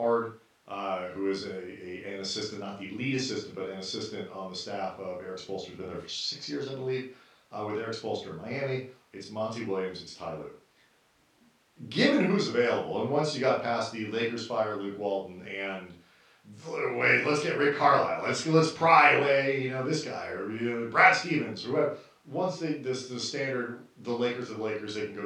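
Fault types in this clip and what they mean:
No technical faults can be heard anywhere in this speech recording. There is nothing to list under any fault type.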